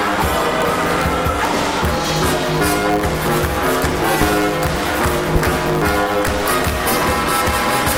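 A steady buzz near 109 Hz runs under the whole clip, and the sound plays about 1.16 times too fast while holding roughly its normal pitch. This is a truncated block size mismatch: one stage writes longer blocks than the next reads, which fits 512-sample blocks being written, and each block's tail is discarded at that rate. From 4.22 to 4.25 s a single loud pop lands about 10 dB above the surrounding sound, which continues beneath it. A sharp voltage step from a plug, switch, static or driver glitch is the likely cause, shaped by the circuits that follow.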